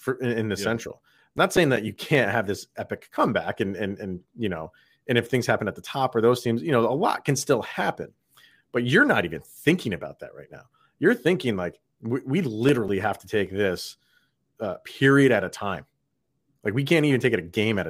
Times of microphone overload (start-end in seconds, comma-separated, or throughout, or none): none